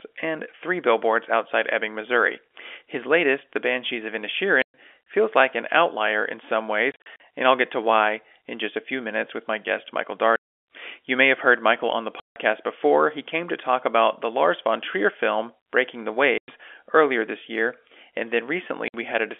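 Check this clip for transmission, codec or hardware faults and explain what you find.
The clip has one fault, packet loss filled with silence. It chops the speech six times, heard through a narrow telephone band.

Packet loss filled with silence occurs at 4.62 to 4.74 s, just before "feels like an outlier". It happens again at 6.92 to 7.20 s, scattered between "an outlier in some" and "and I'll get to". Further gaps fall at 10.36 to 10.63 s, at 12.20 to 12.36 s after "on the", at 16.38 to 16.48 s, and at 18.88 to 18.94 s. Lost packets were replaced with silence. The holes run in 20 ms steps, which fits 20 ms packets. Each one has hard edges.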